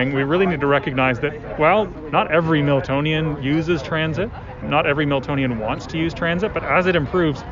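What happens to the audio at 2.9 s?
Nothing goes wrong at 2.9 s: the audio plays through that moment intact, with no dropout, click, glitch or other fault.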